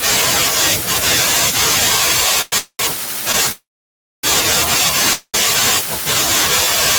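At 2.41 to 2.53 s and again at 2.58 to 2.80 s the speech hangs with a fading buzz, a call audio freeze, likely the jitter buffer running dry while packets were held up. The second one drops to silence for about 70 ms before picking up where it left off. At 3.32 to 3.35 s there's a short stall from a late packet: one sound is stretched for about 16 ms until it arrives. The longest freeze runs from 3.52 to 4.24 s, about 600 ms of it dead silence. Another freeze follows from 5.13 to 5.35 s with about 60 ms of silence. Each freeze slips in a gap rather than cutting anything out.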